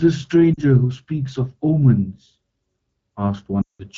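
From 0.54 to 0.59 s, and from 3.61 to 3.82 s, lost AMR speech frames occur. The decoder repeats old settings with falling gain. This gives a brief dip, then a 180 ms gap that drops to near silence within two frames.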